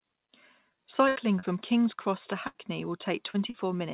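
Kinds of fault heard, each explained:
Burst of packet loss: twice a run of call audio, about 80 ms, never made it in time, at 1.08 s and 2.47 s. The receiver stretched the last bit of sound for roughly 75 ms, fading it into a buzz or hiss, then jumped ahead with that stretch of speech gone.
Short concealed packet loss: three smaller holes of about 40 ms, at 1.39 s, 3.30 s and 3.50 s. Each got patched by continuing the preceding sound for around 35 ms before blending back, so you hear a quick smear or wobble, all heard through the phone-band G.711 call audio, with nothing above 4 kHz.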